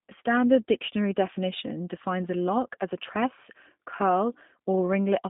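Speech runs the whole way through with a thin, narrow telephone sound, limited to roughly 150 Hz to 3.6 kHz, and a plainly audible rough, slightly synthetic edge. That is the G.729 codec, which fits an 8 kbit/s stream: it rebuilds speech from a vocal-tract filter, pitch predictor and sparse pulses.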